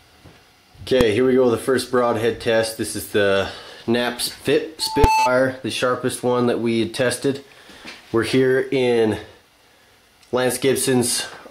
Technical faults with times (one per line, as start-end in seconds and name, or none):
1.01 invalid numbers at full scale
4.80-5.31 loudspeaker feedback squeal
5.04 invalid numbers at full scale